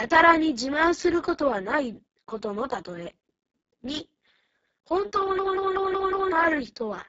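The speech here went through the Speex codec at one of its lowest quality settings, which fits a bitrate of roughly 5.8 kbps. With so few bits left for the excitation, the voice comes out heavily degraded: hoarse, noisy and edging toward robotic. Nothing is present above 7.7 kHz, and the upper band is only a thin, noise-like fill. From 5.39 to 6.32 s, a system hang loop occurs. The machine froze while the audio hardware kept replaying the same ring buffer, which fits an 8192-sample buffer. One 186 ms slice repeats exactly five times at 5.38 Hz, giving a machine-gun stutter, and about a second of real audio is lost.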